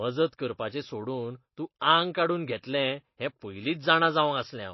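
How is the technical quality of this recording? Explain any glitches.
The quality is poor, with audible compression damage across the whole speech clip. Throughout, the sound is dull, with nothing above 5.8 kHz, and has a watery, swirling texture, with chirpy sibilants and smeared consonant onsets. This is likely heavy MP3 compression, consistent with a very low bitrate around 24 kbps. Short of bits, the encoder cut the treble and kept dropping weak frequency lines in and out between frames. That flickering swirl distinguishes it from a simple low-pass filter, which would only dull the sound.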